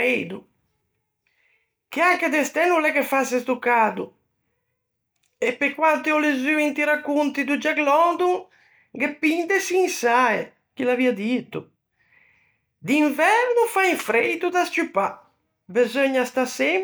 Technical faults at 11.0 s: none

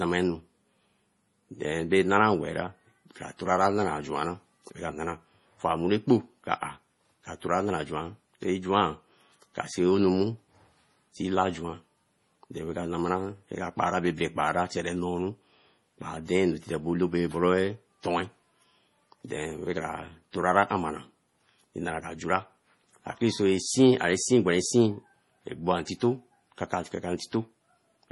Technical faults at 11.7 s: MP3 compression

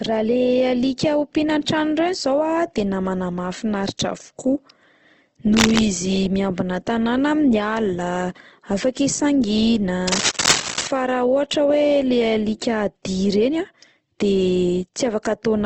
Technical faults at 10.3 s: Opus compression; cable scratch noise

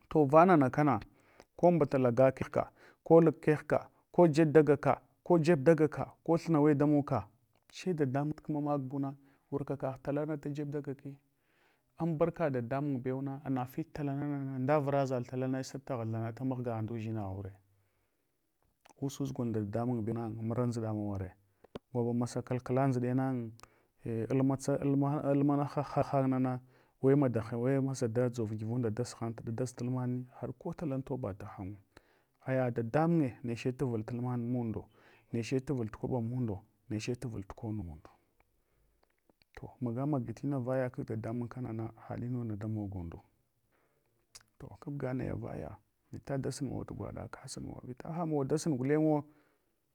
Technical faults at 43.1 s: none

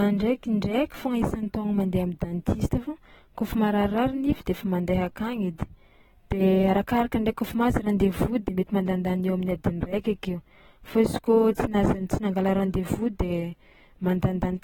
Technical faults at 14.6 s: AAC compression

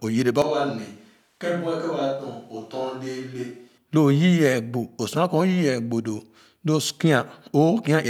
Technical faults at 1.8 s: switch to a distant microphone

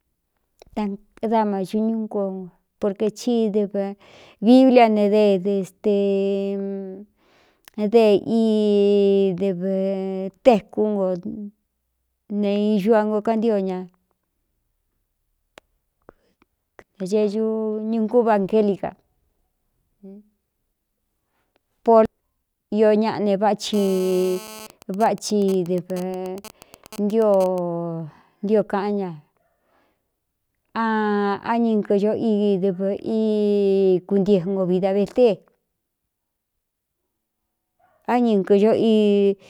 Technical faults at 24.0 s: GSM phone buzz

